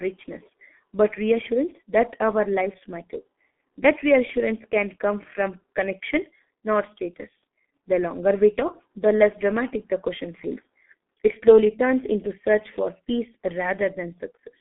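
Throughout, the speech passed through a G.723.1 codec with heavy damage, consistent with roughly 6 kbit/s. The band is cut near 250 Hz and 3.4 kHz, leaving it muffled, hoarse, with blurred consonants.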